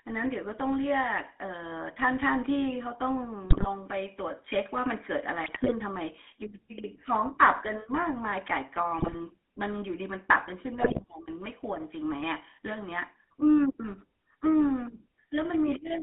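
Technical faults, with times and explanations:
Throughout, GSM full-rate codec: the sound is confined to a telephone band of roughly 300 Hz to 3.5 kHz and carries a plainly audible buzzy, gravelly roughness. The codec rebuilds speech from a vocal-tract filter excited by a coarse pulse train that keeps only a fraction of the original excitation, so fine detail is replaced by a regular, grainy texture. The character fits the original GSM coder at around 13 kbps.
3.50–3.69 s, 5.44–5.72 s, 8.98–9.16 s and 10.80–11.03 s, GSM bit errors: each burst breaks the speech into squawks, pops and gargling for a fraction of a second. Corrupted bits reaching the decoder scramble the filter, pitch or gain values, so some frames are bent into the wrong spectral shape or jump in level. The density of the damage suggests a few percent of bits flipped on a weak link during each burst.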